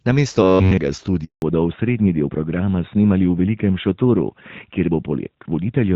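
From 0.43 to 0.78 s the speech collapses into a rigid, metallic buzz pitched at about 94 Hz, loosely following the syllables. This is robotic sound from repeated short buffers. New audio is likely arriving too slowly, so the player keeps looping a fragment of roughly 10.7 ms, one over 94 Hz, while the real signal is skipped. Across this whole stretch, every moment is a repeat rather than fresh audio.

At 1.24 s the speech fades out within a few tens of milliseconds, and nothing is heard until 1.42 s. This 180 ms hole is a handover gap. The call was being passed from one network link to another, no speech frames reached the phone during the switch, and whatever was said in that window is simply gone rather than concealed.

From 1.42 s to the end the voice sounds duller and rougher, with the airy sibilance and crispness gone. This is a fallback to narrowband. The call dropped from AMR-WB at 12.65 kbit/s, the HD Voice codec that carries the opening second with only light coding roughness, to AMR-NB at 12.2 kbit/s. 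That older codec cannot carry anything above 4 kHz, so the upper band of the speech is cut off for the rest of the clip.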